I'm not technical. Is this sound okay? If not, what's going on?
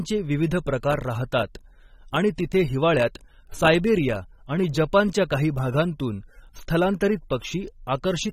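No. Throughout the speech, the sound is dull and smeared, with a watery, fizzy edge on hiss-like sounds, and nothing comes through above 16.5 kHz. This is likely AAC compression, which saves space by discarding detail, here heavily enough to hear.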